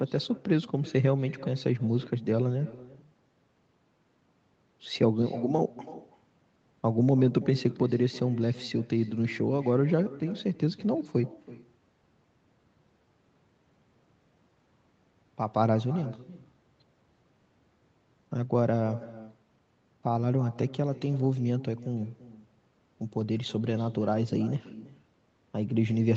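From start to finish, every phrase is followed about a third of a second later by a quieter, thinner copy of itself, about 19 dB down. This is echo with no canceller: the far end's loudspeaker feeds its microphone and the round trip returns the talker's own speech. Unlike room reverberation, which smears each syllable into a decaying tail, this is a distinct delayed repeat, set apart by a gap.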